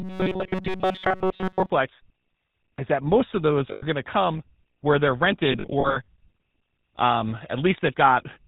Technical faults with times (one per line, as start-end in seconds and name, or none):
0.00-8.47 GSM full-rate codec
0.01-1.70 robotic sound from repeated short buffers
3.72-3.84 lost GSM frames
5.27-7.78 pre-emphasis left on
5.52-6.09 lost GSM frames